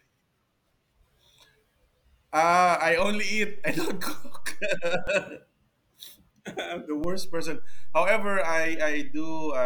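At 2.99 s a DC step shifts the waveform's zero line by about -26 dBFS, returning at 5.07 s. After "I'm the", another step of about -23 dBFS begins at 7.04 s and holds to the end. Each jump thumps while the speech continues.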